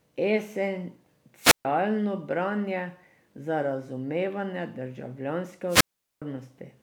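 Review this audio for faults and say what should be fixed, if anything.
Hiss swells, then the speech cuts to near silence at 1.40–1.65 s (a 137 ms hole) and 5.68–6.22 s (412 ms): wireless microphone squelch dropout, the fading radio signal tripping the receiver's mute. Fix it by improving the RF path: antenna placement, line of sight and a clear frequency.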